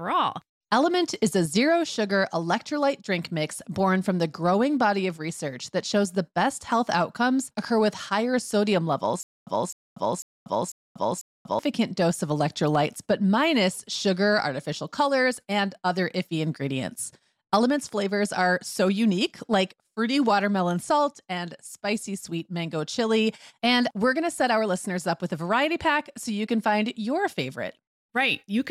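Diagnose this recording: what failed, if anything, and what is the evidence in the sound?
Playback stalled in a stutter with silent gaps from 9.23 to 11.59 s, right after "occur with higher sodium" and before "dose of electrolytes but". The same 257 ms fragment of speech plays five times, each followed by about 239 ms of digital silence, so it repeats every 496 ms. The likely cause is a stalled stream or buffer replaying its last block on each retry. The identical, evenly timed repeats set it apart from random packet-loss dropouts, and the speech in between is lost.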